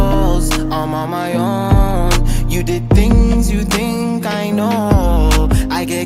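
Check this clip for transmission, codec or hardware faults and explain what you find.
Nothing in the clip points to a transmission, codec or hardware fault. The signal holds steady throughout, with no breaks, jumps or added disturbances to report.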